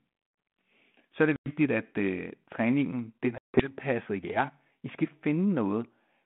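Packet loss on an ADPCM call leaves a 100 ms silent hole after "er det" at 1.36 s and a 160 ms hole after "øh træningen den er" at 3.38 s. Each shows as a sheer-edged gap in the waveform and a blank column on the spectrogram. When the G.726 stream resumes, its adaptive predictor and step size are out of step with the sender's, so the speech returns distorted until about 1.51 s and 3.72 s.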